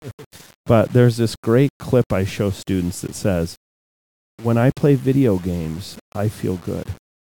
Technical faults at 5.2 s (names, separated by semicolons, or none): low bit depth without dither